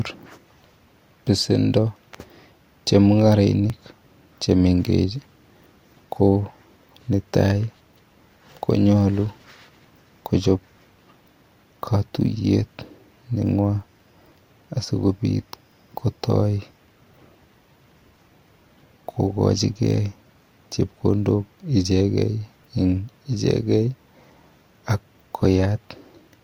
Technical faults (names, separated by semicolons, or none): dropped buffer (overrun)